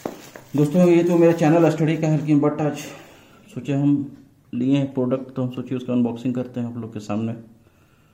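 No technical faults can be heard anywhere in the clip. Nothing in the audio calls for comment.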